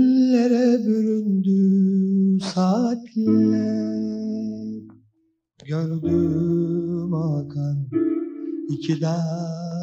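No technical faults are audible.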